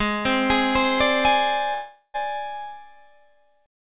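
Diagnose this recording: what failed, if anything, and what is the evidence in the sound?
Packets were most likely held up in the network, so the jitter buffer ran dry and produced a call audio freeze from 1.74 to 2.16 s. About 0.4 s of concealment sound fills the gap, fading into roughly 30 ms of silence. The audio then resumes where it stopped, 400 ms later, with nothing missing. The narrowband path, empty above 4 kHz, fits a G.711 call codec.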